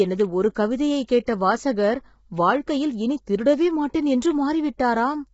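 Throughout, the speech sounds rough and grainy, with noise between harmonics and nothing above 7.7 kHz. This is likely low-delay AAC compression at a low bitrate, around 16 kbps; its short frames blur pitch harmonics in a way ordinary band-limiting doesn't. At 0.55 s, after "எனது ஒரு", a brief hiss leads a sharp attack. This is pre-echo: block-wide quantisation noise spills about 10 ms ahead of the onset. It happens again from 1.25 to 1.28 s, after "எனது ஒரு கவிதையை" and before "வாசகர் வாழ்க்கையில் இனி திருடவே", spreading about 22 ms. It differs from reverb because it comes before the attack rather than trailing after it.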